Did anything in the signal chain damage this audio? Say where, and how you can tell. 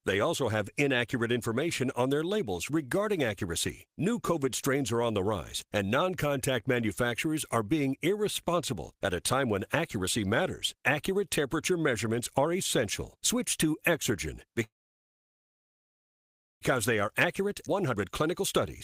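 Yes. At the network and jitter-buffer stage, a call audio freeze runs from 14.63 to 16.63 s, likely from packets held up in transit. The buffer ran dry, and the last sound trailed off into near silence for about 1.9 s. The audio then resumed exactly where it had stopped, so the sound is delayed by about 2 s rather than lost.

A jitter buffer speed-up follows from 16.75 to 18.43 s. Holding that backlog, the receiver trimmed many short pitch-period slices to catch up, removing about a fifth of a second in total. Playback runs at 110% speed with pitch unchanged, so the sound comes across as hurried.

A skip ahead at 17.66 to 17.68 s sits inside that stretch. Roughly a second of waiting audio was dropped. The material on either side is spliced almost directly, with only a tiny 2 ms fill, so the sound lurches forward abruptly.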